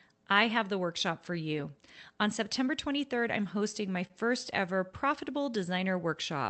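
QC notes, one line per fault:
3.59 to 4.12 s, repeated stalls (stutter): the jitter buffer ran dry four times in about half a second because packets arrived late or more slowly than playback consumed them, and each time the receiver stretched the last sound to cover the wait. About 54 ms was filled this way, roughly a tenth of that span, with the longest hold near 30 ms. Nothing is lost, but the sound catches and drags in small hitches before running on smoothly.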